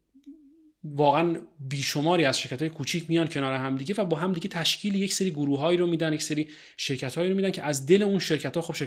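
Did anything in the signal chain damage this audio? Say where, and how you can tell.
No, nothing in the signal chain damaged this audio.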